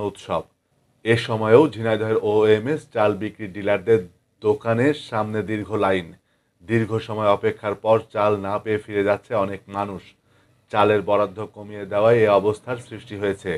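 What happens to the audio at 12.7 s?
At 12.7 s a steady buzz at about 43 Hz runs under the sound, as it does for the whole clip, and the pace stays at normal speed (1.0×). This is a block size mismatch (truncated): one stage hands over blocks larger than the next stage takes in, and the excess at the end of each block is discarded. Each cut leaves a small discontinuity, and the regular repetition of those cuts produces the 43.1 Hz buzz, a rate that fits blocks of 1024 samples.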